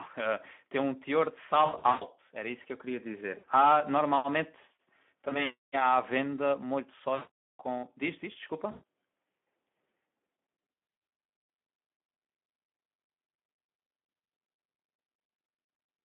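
A speech recording carried throughout by the Speex codec. Its band runs from about 200 Hz to 3.5 kHz, and its hoarse, noisy texture fits a low-quality setting near 11 kbps. At that rate the CELP coder has too few bits to model the excitation, so the voice turns noisy and hoarse. Superimposed on this is VoIP packet loss concealed by the speech codec, at 1.65–2.04 s, 3.37–3.45 s, 5.29 s, 7.15–7.51 s, 8.71–8.83 s, 10.71–11.07 s and 14.09–14.29 s. During each gap the decoder keeps repeating its last pitch and filter at falling gain, so the speech smears into a fading buzzy tone or coloured noise. The longest stretch is the 420 ms loss at 7.15 s. Losses of about 260 ms are scattered across 1.65–2.04 s and 10.71–11.07 s, and 120 ms is spread over 14.09–14.29 s. Because each frame is predicted from the previous one, the voice stays weak and distorted briefly after each gap ends.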